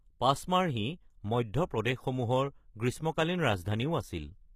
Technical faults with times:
0.00-4.55 HE-AAC compression

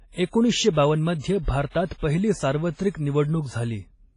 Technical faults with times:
0.00-4.17 WMA compression

